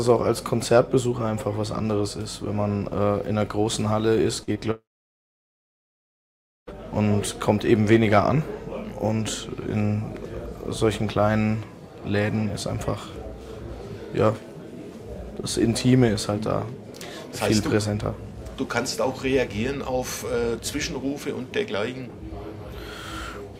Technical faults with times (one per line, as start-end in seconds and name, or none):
4.43-4.57 short concealed packet loss
4.71-6.73 long network dropout